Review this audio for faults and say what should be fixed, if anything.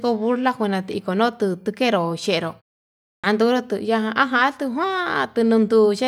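At 3.06 s, after a 0.53 s pause, speech resumes with a clipped start after a pause. The output device wakes and relocks while about 176 ms, until 3.24 s, is swallowed. Muted pauses drop only background, but here the onset itself is missing. Keeping the output stream active through silence, or disabling the device's power saving, would prevent it.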